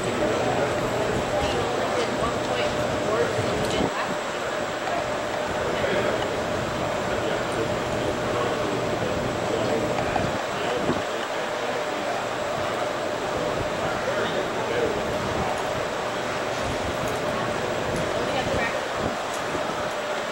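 Nothing goes wrong anywhere in the audio; there's not a single glitch, dropout or stray noise to point to.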